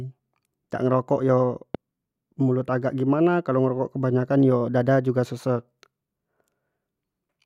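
At 1.75 to 1.77 s there is a single loud pop. It is a sharp, brief burst that stands well above the level of the speech, then it is gone. The speech carries on underneath without a break. The cause is likely a sudden electrical pulse entering the signal path, such as from a plug, a switch, static discharge or a driver glitch. The circuits that follow shape that pulse into an audible pop.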